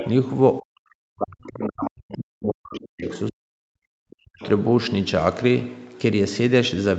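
In the first 0.1 s a second voice sits under the speech, about 10 dB down: the other side's voice leaking through, likely loudspeaker echo the canceller failed to subtract from the microphone. From 0.6 to 3.06 s the talker's speech sinks, by around 40 dB at its deepest; this is speech suppressed in double talk, likely the canceller ducking everything while both sides spoke. Within that stretch, at 2.74 to 2.80 s, a brief scrap of the far voice slips through about 25 dB down, then again just after it at 3.07 to 3.18 s at about 15 dB down. These scraps differ from the suppression because a separate voice is added rather than the main talker being removed. Further suppression dips follow at 3.29 to 3.95 s and 4.20 to 4.43 s, each pulling the speech down sharply before it recovers. Throughout, the audio stops at 8 kHz, as expected of the Opus call path.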